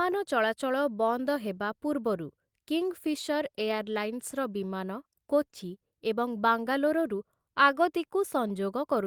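Right after "ଚଳାଚଳ ବନ୍ଦ ହେବା ପୂର୍ବରୁ", from 2.81 to 4.53 s, there's a call bitrate drop. The bandwidth estimate fell and the encoder went from 32 to 17 kbps, sitting at the bottom for about 1.65 s. The speech turns coarse and rough until "ବିମାନ କୋଚି ଏବଂ ବାଙ୍ଗାଲୋରରୁ".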